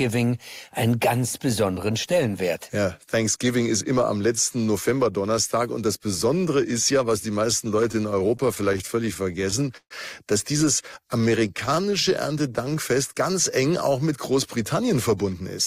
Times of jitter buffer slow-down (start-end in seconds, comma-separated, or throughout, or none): 11.82-12.76